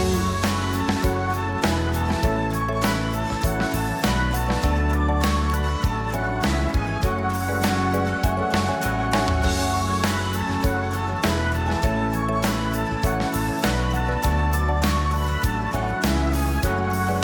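A single sharp snap sits on top of the sound at 5.50 s. It is an electrical switching spike, over in about a millisecond. It peaks somewhere around -15 dBFS. The click is not part of the recorded sound itself. It was added on the audio line. The likely cause is a nearby switch, motor or static discharge throwing a brief arc. The line picked that arc up as a single burst of interference.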